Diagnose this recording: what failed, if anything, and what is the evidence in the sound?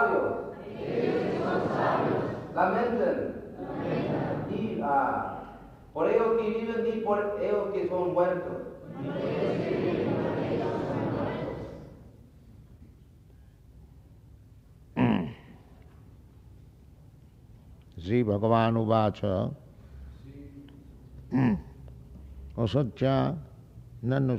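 The converter stage shows sample clock jitter throughout: a faint hiss riding loud, bright passages and vanishing in silence, unlike steady background noise. Microsecond-scale timing wobble leaves error roughly 50 dB below the signal.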